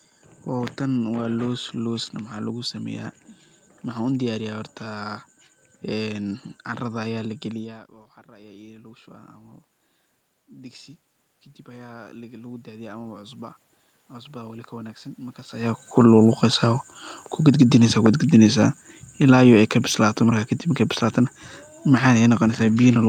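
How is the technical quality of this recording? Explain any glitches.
The one technical fault is an automatic gain falling, from 17.32 s to 20.54 s. Over those three seconds the speech sinks by about 4 dB, and the room noise underneath drops with it, which is the giveaway. The automatic gain control judged the input too loud, or its background noise too strong, and eased its gain down gradually, so everything passing through it shrank together. The earlier level shifts near 7.5 s and 15.5 s are the talker moving relative to the microphone, not a system fault.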